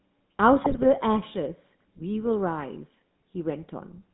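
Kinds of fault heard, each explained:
GSM full-rate codec: Throughout, the speech has a buzzy, gravelly roughness, and the band runs only from about 150 Hz to 3.7 kHz. The damage is plainly audible. It comes from pulse-driven vocal-tract modelling that discards most excitation detail, consistent with 13 kbps full-rate coding.
GSM bit errors: From 0.64 to 0.85 s the speech breaks into squawks, pops and gargling. Flipped bits reached the decoder and corrupted filter, pitch or gain values, which warped the spectrum and level. This fits about ten corrupted frames at roughly a 2% error rate.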